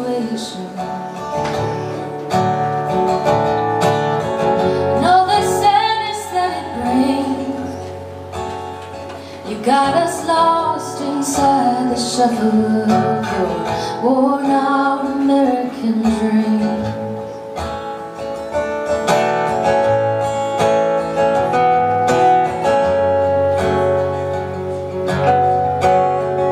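No technical faults can be heard anywhere in the clip. There is nothing in the audio that calls for a timestamp or an explanation.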